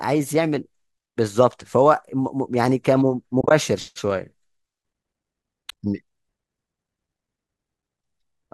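Speech here drops out in small soft holes from AAC frame loss with muting: a brief one at 1.52 s, a scattered patch of gaps from 3.41 to 3.51 s with the longest run around 30 ms, a short cluster at 5.70 s, and another brief one at 7.82 s. The decoder zeroes each missing frame and the overlapping windows fade it out and back in, so you hear dips. The roughly 10 ms hole size fits the short frames of low-delay AAC, which is likely the codec here.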